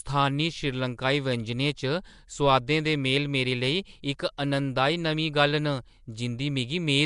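From start to finish the speech has a rough, hissy halo and a smeared, underwater feel, with nothing above 10.6 kHz. That points to Nellymoser compression, likely at around 44 kbps, where weak bands get no bits and are filled in with noise. At 4.37 s a sharp attack comes in soft, with a brief hiss about 10 ms ahead of it. That's pre-echo: the coding noise sized for the loud onset gets spread across the quiet moment just before it in the same block.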